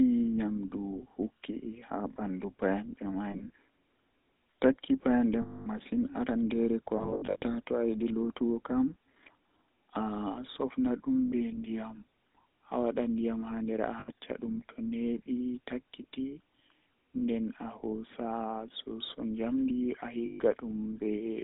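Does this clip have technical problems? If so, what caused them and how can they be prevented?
Yes. The whole clip has the buzzy, gravelly roughness of the GSM full-rate codec. The coder rebuilds the voice from a vocal-tract model driven by coarse pulses, in a 150 Hz to 3.7 kHz band, which fits 13 kbps GSM. Plain band-limiting would sound muffled but clean, while this grit sits inside the voice itself. A wideband codec end to end prevents it.

Lost GSM frames produce a held, metallic ring as the decoder repeats the last good frame at falling level. This happens in scattered short bursts at 3.30–3.50 s and 6.98–7.43 s, and as single gaps at 5.42–5.68, 11.26–11.33, 14.00–14.09, 17.18–17.23 and 20.26–20.41 s. Ordinary dropouts leave silence or clicks, but this leaves a ringing tail. Better radio coverage prevents it.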